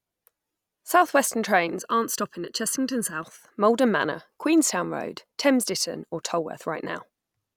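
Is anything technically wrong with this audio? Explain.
Yes. From 1.79 to 3.23 s the speech turns hollow and phasey, a channel delay causing comb filtering. One channel lags by under a millisecond, and the mono sum cancels at evenly spaced frequencies. The first notch sits near 700 Hz.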